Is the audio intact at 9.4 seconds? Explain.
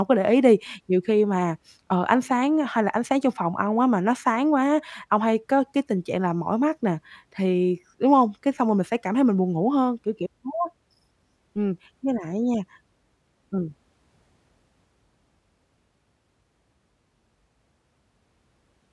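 Yes, at 9.4 seconds the speech plays through cleanly, with no fault to be heard at that moment.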